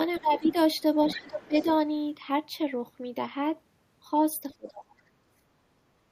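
This speech clip has the other side's voice leaking through at 0.14–0.2 s, 0.44–0.55 s and 1.1–1.68 s, roughly 15 to 25 dB below the talker, likely from an echo canceller leaving loudspeaker echo behind. Speech is suppressed in double talk at 0.2–0.46 s, 1.04–1.66 s, 4.57–5.0 s and 5.34–5.45 s, dipping by roughly 15 to 25 dB, likely because the canceller turned down both voices while they overlapped.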